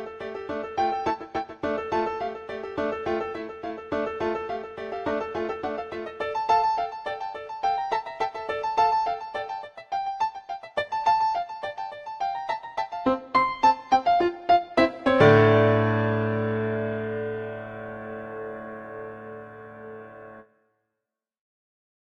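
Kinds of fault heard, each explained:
No kinds of fault are heard in this sound.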